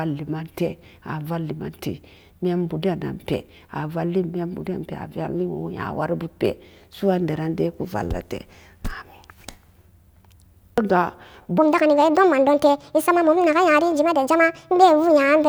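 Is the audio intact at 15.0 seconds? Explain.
No. At 15.0 s the speech sits inside a section at the wrong speed, running from 11.58 s to the end. It plays 1.54 times too fast, likely from playback against the wrong clock. Pitch rises about seven semitones, so the speech sounds high and hurried.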